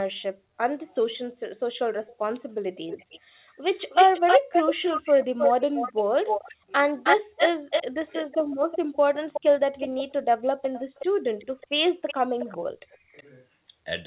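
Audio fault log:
2.07–2.18 s, 2.75–3.20 s, 3.74–12.58 s and 13.17–13.23 s, echo leak: the far end's echo canceller likely let loudspeaker pickup back into the call. Delayed copies of the speech arrive about 0.3 to 0.4 s late. They sit roughly 25 and 15 dB below the speech at first, then are about as loud as the speech across the long stretch, and faint again at 13.2 s.
6.48–6.72 s, 7.89–8.47 s and 12.88–13.16 s, speech suppressed in double talk: with both sides sounding at once, the echo canceller likely mistook the talker for echo and attenuated everything. The speech drops by up to about 40 dB (about 30 dB in the last case) over a few hundred milliseconds each time.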